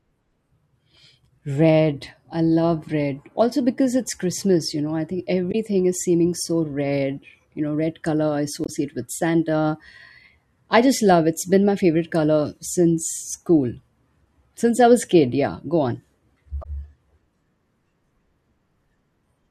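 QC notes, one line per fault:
5.51–5.55 s, 8.64–8.69 s and 16.61–16.66 s: damaged data in a compressed stream. Three short glitches of about 40 to 50 ms each break into the speech, the first between "you know I think" and "is seeming so red", the second just after "know red color I". Corrupted bytes there make the decoder misread frames and lose sync until it finds the next header.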